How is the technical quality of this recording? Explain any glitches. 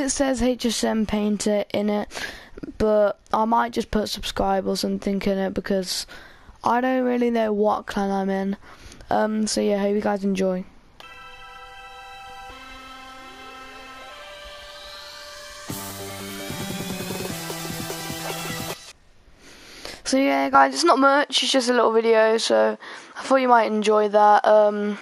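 One fault stands out. From 20.55 s to the end, the sound turns duller, with nothing above 11.4 kHz, and the level shifts by roughly 5 dB. There is no gap at the change, and a faint new noise floor appears. This is likely an input switched to a poorer device.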